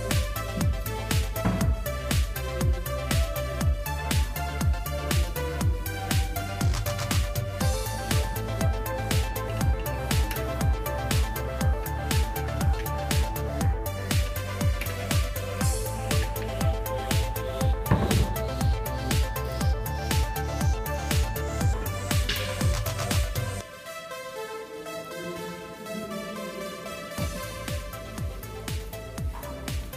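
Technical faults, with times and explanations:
No technical faults are audible anywhere in the recording.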